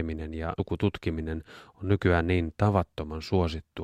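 At 0.59 s, compressed frames were skipped, likely about five 32 ms frames, so the speech jumps ahead roughly 150 ms.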